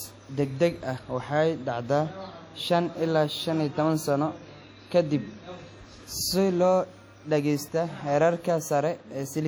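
Throughout the speech, a transform codec running at a low bitrate, likely WMA compression, spreads its quantisation noise across long blocks and zeroes weak spectral detail. The result is a plainly audible ringing, washy smear with hiss that breathes alongside the signal, consistent with about 48 kbps.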